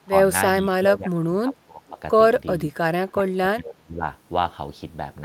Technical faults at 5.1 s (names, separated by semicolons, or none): none